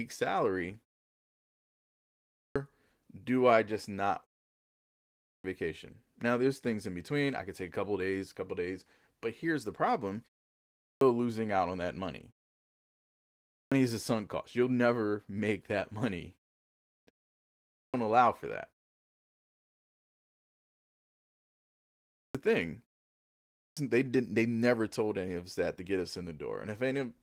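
Speech bursts in abruptly with its opening sounds missing at 2.12 s (before "do I just not"), 5.05, 10.57 (after "but here's the problem"), 13.26, 16.65 (after "never make that money"), 17.53, 21.92 and 23.33 s. Each is a clipped start after a pause: the output device sleeps during silence and swallows roughly 0.4 to 0.46 s while waking.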